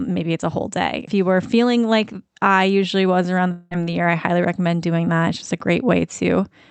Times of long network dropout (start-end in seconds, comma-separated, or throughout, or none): 3.51-3.74